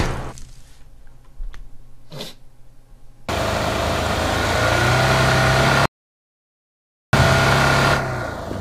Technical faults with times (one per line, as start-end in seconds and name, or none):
5.86-7.13 audio dropout to silence